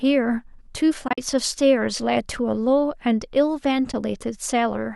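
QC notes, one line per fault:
1.08–1.18 s, AAC frame loss with muting: the speech drops into a cluster of soft-edged gaps totalling 80 ms within 100 ms, the longest run about 50 ms. This fits several lost frames of about 10 ms each that the decoder filled with silence, while the overlapping windows faded the sound out and back in.
3.92–3.94 s, AAC frame loss with muting: a brief 20 ms dip, softly faded. It sounds like a couple of frames the decoder zeroed.
throughout, low-delay AAC compression: light coding damage, likely from low-delay AAC (AAC-ELD) at 64 kbps.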